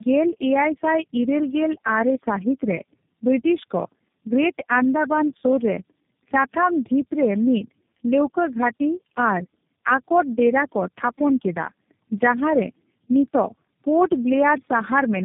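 From start to finish the speech sounds rough, muffled and warbly, with nothing above 3.8 kHz. This is tandem speech coding: the call was decoded and re-encoded at each network border, and each low-rate coder worked on the previous one's damage. The sound points to three speech codecs in a row, likely AMR-NB, then iLBC, then G.729A, joined by G.711 links, so the artefacts compound into a harsher, more smeared result than any single codec.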